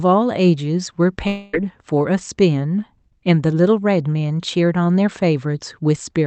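At 1.27 s the speech breaks off. Until 1.55 s, the last sound is stretched into a fading buzz, never falling to silence. Speech then resumes with 260 ms gone. This is likely a long network dropout, masked by the Opus call decoder.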